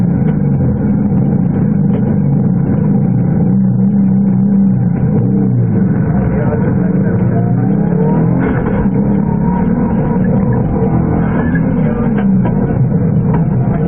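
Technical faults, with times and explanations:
10.74 to 13.88 s, adaptive stream at a lower bitrate: the sound abruptly turns dull and synthetic without any gap, and the spectrogram's upper band becomes patchy and smeared, consistent with a very low-rate HE-AAC stream.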